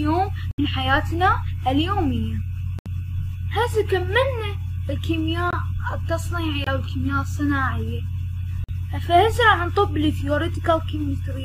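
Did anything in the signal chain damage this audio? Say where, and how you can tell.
Yes: corrupt frame muted. Damaged compressed frames were rejected by the decoder and silenced, leaving abrupt short holes at 0.51, 2.79, 5.51, 6.64 and 8.64 s, with timing preserved.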